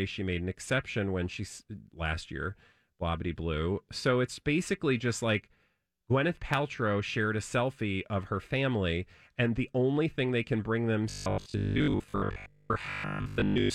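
From 11.10 s to 13.74 s, just after "thing they can bring", fresh audio likely arrived too slowly, so the software replayed a 20 ms buffer for most of that stretch. This robotic sound from repeated short buffers is a rigid 50 Hz buzz loosely tracing the words.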